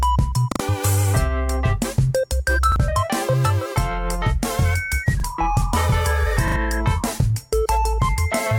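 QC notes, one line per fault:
0.52 to 0.60 s, repeated buffer: a piece of about 40 ms plays three times with a hard join at each repeat. New audio came late, so the device replayed its last block. Around 70 ms of sound is skipped.
2.72 to 2.76 s, repeated buffer: a 40 ms piece plays twice, heard as a brief stutter. About 40 ms of sound is lost.
5.20 to 5.24 s, repeated buffer: same single repeat, same short stutter and loss.
6.48 to 6.56 s, repeated buffer: a triple play like the first, with a stutter and about 70 ms gone.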